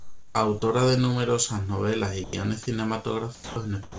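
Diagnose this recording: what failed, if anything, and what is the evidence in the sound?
Comfort noise in place of the background, at the call-processing stage. From 0.00 to 0.35 s the room tone is a steady, featureless hiss, about 3 dB quieter than the real background that follows, which sits about 30 dB below the loud parts of the speech. The sender's discontinuous transmission likely stopped sending during this opening pause, and the receiver synthesised spectrally shaped noise to fill the gap until live audio resumed.

Sound dropped by the voice detector, also at the call-processing stage, occurs three times. Just after "de numerosas novelas y", the speech vanishes from 2.24 to 2.33 s, about 90 ms, and plain noise takes its place. From 3.35 to 3.56 s and from 3.83 s to the end, the sound gives way to steady noise, losing 90 ms and 110 ms respectively. The likely cause is the detector misclassifying low-level speech as background and halting transmission, so comfort noise covered the missing segments. 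The G.722 path carrying this audio leaves nothing above 8 kHz.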